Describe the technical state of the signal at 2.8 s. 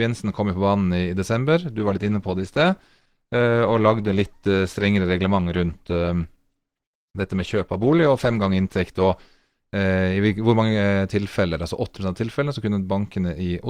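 At 2.8 s the speech is inside a stretch where the adaptive stream is at a lower bitrate, running from 1.72 to 9.72 s, just after "i desember". The connection slowed and the player switched versions. Codec artefacts rise, with sudden onset and no gap. It fits a step down from 64 to 16 kbit/s Opus.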